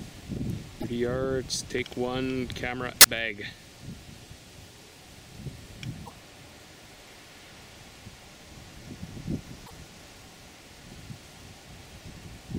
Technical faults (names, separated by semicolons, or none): damaged data in a compressed stream